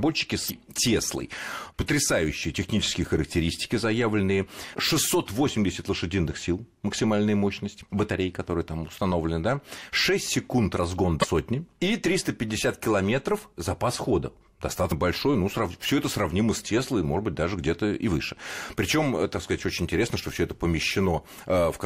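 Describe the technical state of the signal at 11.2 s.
At 11.20 to 11.24 s the speech breaks into a short glitch from damaged data in the compressed stream: the decoder misreads the corrupted frames, loses sync and resumes at the next frame header.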